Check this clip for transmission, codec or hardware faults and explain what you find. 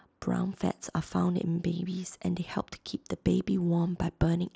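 No transmission, codec or hardware faults turn up in this speech, which reaches the ear through a Bluetooth mSBC headset link behaving as that wideband path is expected to.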